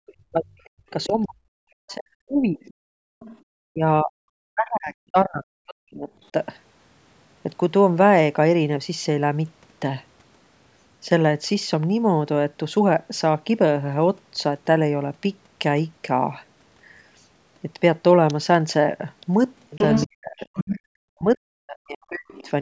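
From 0 to 2.86 s, the speech dips and breaks up, falling by roughly 40 dB over about two seconds. The likely cause is speech suppressed in double talk: the echo canceller, unable to separate the talker from loudspeaker echo, pulled both down together. Inside that stretch, from 0.65 to 1.06 s, a faint second voice sits roughly 25 dB below the speech, likely the other side's voice leaking through past an incompletely cancelled loudspeaker path. The same faint leak returns from 2.64 to 3.39 s. Between 3.14 and 3.43 s, background gated by the echo canceller occurs: the microphone was clamped while the loudspeaker played, so the room sound drops by about 31 dB for roughly 70 ms. From 3.71 to 6.33 s the speech again fades and fragments by roughly 40 dB for about two seconds, likely suppression during double talk. From 19.77 to 22.49 s, the same pattern recurs for about a second and a half. Within it, from 19.78 to 20.79 s, the leaking far-end voice is strong, only about 5 dB under the speech and clearly audible. 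A brief quieter leak follows from 22.29 to 22.5 s.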